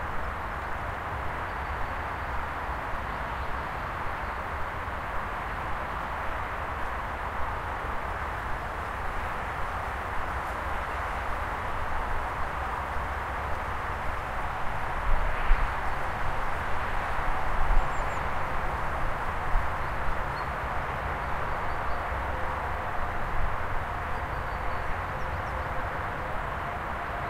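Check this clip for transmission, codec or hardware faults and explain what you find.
No faults turn up on checking the clip.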